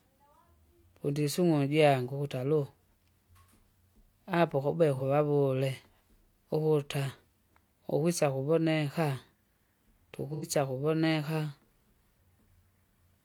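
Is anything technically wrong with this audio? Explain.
Yes. There is AAC frame loss with concealment, twice in this speech. The first gap runs from 4.96 to 5.02 s and lasts about 43 ms, which fits one lost frame. The second runs from 10.33 to 10.45 s and lasts about 85 ms, which fits two frames. The decoder had no data for these stretches. It rebuilt them from the last good spectrum. Both patches sound briefly smeared and noisy.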